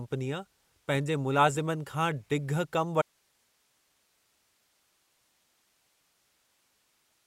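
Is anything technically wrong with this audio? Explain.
Yes. At 3.02 s the speech drops out abruptly and never returns; the rest of the clip holds only hiss, roughly 45 dB below the signal. This is an audio dropout to a faint residue, likely a lost source feeding a path that stayed live.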